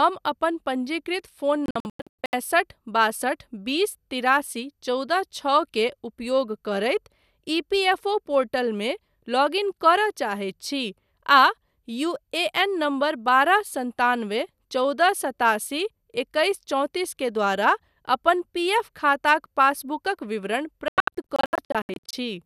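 Between 1.66 and 2.34 s the speech breaks into short silent holes totalling 456 ms, the longest 96 ms, and again from 20.88 to 22.14 s, where 672 ms goes missing. This is a digital broadcast dropout: the receiver muted corrupted frames, and that audio is lost.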